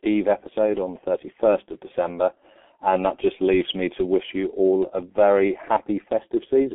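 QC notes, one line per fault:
Throughout: G.723.1 codec. The speech is muffled and hoarse, with smeared consonants. Nothing reaches above 3.7 kHz and the band is held to about 300 Hz to 3.5 kHz. The heavy damage points to a roughly 6 kbit/s coder whose 30 ms frames update the voice model too slowly to follow fast articulation.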